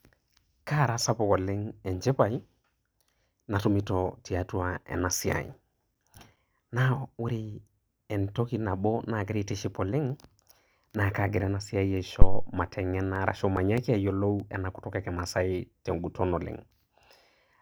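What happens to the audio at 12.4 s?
A phantom power thump runs from 12.22 to 12.53 s: a supply switching on the live input sends a voltage step through the coupling capacitors, which the speech recording captures as a deep, low thud decaying in about 70 ms.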